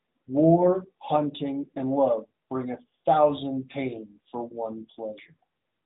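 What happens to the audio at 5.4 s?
At 5.4 s the speech is still inside the AMR narrowband mobile codec coding that runs through the whole clip. Each 20 ms frame is rebuilt from a vocal-tract model fed by a few pulses, at a rate that fits 10.2 kbps. That leaves the voice plainly buzzy and synthetic. A spectrogram shows everything cut off flat at 3.8 kHz.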